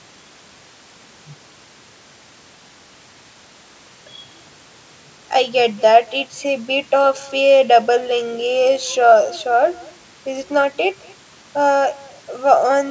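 Throughout the speech, every phrase is trailed about a fifth of a second later by a faint, thin copy, roughly 25 dB below it. That is echo with no canceller: the far end's loudspeaker feeds its microphone, and nothing removes the returned sound.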